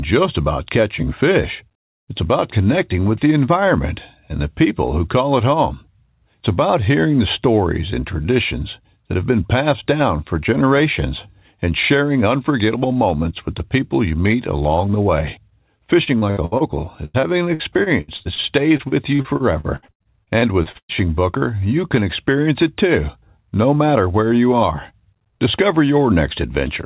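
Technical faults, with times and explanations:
16.04–16.63 s, 17.05–18.41 s, 18.77–20.92 s, repeated packet loss (robotic sound): packets keep dropping, and gaps of up to 113 ms are patched by repeating the last sound, so roughly a third sounds choppy with pieces missing.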